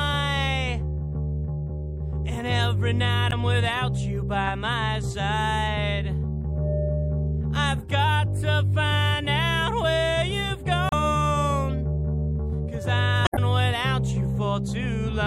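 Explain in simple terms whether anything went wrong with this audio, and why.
Throughout the clip there is plainly audible MP3 compression. Quieter detail has a watery, swirling quality, most likely because the encoder did not have enough data to spare and discarded parts of the sound it judged unimportant.

There is also damaged data in a compressed stream at 3.28 to 3.33 s, 10.89 to 10.93 s and 13.24 to 13.39 s. At each point the decoder hit corrupted bytes and lost its place in the file. That produces a short chirp or blip before playback resumes.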